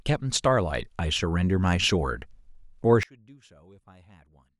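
From 3.03 s to the end, the speech drops about 30 dB to a faint residue. The likely cause is one channel inverted, so the shared centre content cancels in the mono sum. The waveform envelope abruptly shrinks, and the spectrogram turns nearly blank.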